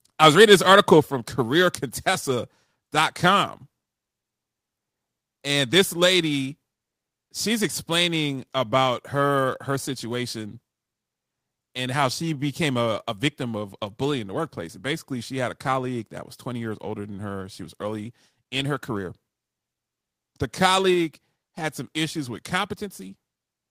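From 0.23 to 0.93 s the speech shows microphone overload: the loudest syllables push about 4 dB past the converter's limit and a small share of samples flatten, adding a harsh crackle. The waveform shows squared-off peaks, and the spectrogram shows broadband smearing, likely from input gain set too high.

At 1.02 s the microphone volume steps down abruptly by about 6 dB, with voice and background falling together. The waveform envelope shrinks in one step and the spectrogram darkens evenly across all frequencies, consistent with call software likely reacting to the preceding distortion.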